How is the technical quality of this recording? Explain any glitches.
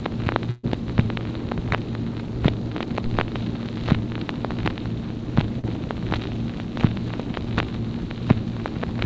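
The recording has two dropouts from packet loss on a call connection, and its top end stops at 8 kHz, which fits a G.722 codec at 64 kbps on a WebRTC call path.

Burst of packet loss, 0.50 to 0.65 s: about 140 ms of audio never arrived in time. The receiver extended the last sound for roughly 134 ms, letting it fade as a held buzz or hiss, then jumped ahead with that stretch gone.

Short concealed packet loss, 5.59 to 5.65 s: about 40 ms went missing. The decoder patched it by carrying the preceding sound forward for about 38 ms and blending back in, producing a brief smear or wobble where a short sound may be swallowed.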